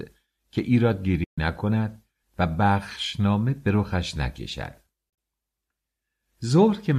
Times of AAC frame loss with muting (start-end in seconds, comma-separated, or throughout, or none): 1.24-1.38, 5.09-5.17